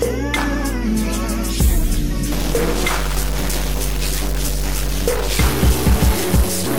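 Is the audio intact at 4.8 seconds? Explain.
No. At 4.8 seconds you're in the middle of a stuck bit fault that starts around 2.32 s and runs to the end. It sounds like one data bit is pinned, likely from a broken line or converter, so about half the samples get shoved by a fixed step of roughly 20 dB below full scale. That gives a harsh, buzzy distortion riding on the sound, and the quiet stretches fill with noise because the bit flips with the sign of small values.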